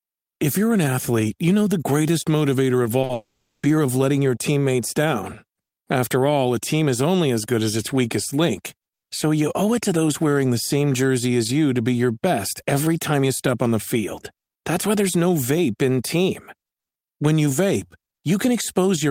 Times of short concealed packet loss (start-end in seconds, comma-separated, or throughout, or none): 2.83-3.11